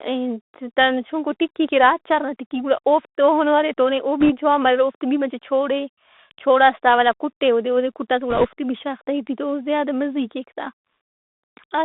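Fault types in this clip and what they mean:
Bluetooth CVSD headset codec: Throughout, the speech is narrowband, roughly 250 Hz to 3.7 kHz, with scratchy s sounds, granular hiss beneath, and loud bright peaks smeared where the adaptive one-bit step falls behind. That hiss and overload set it apart from a clean telephone filter.
bit errors on a Bluetooth voice link: Brief rushing crackle at 4.20–4.31 s, after "ارے تو ارے او", and at 8.30–8.48 s, before "بھی شاغ تہ ای", with a few percent of bits flipped. Unlike packet loss, there is no gap or loud click, since each flipped bit nudges the step only slightly.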